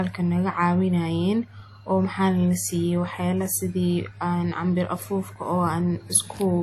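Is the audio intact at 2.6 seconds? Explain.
No. At 2.6 seconds, as throughout the speech, there is nothing above 16.1 kHz and the artefacts of the earlier encoding remain. This is low-bitrate audio saved at a high bitrate, likely a roughly 48 kbit/s WMA-style encode re-saved as high-bitrate MP3.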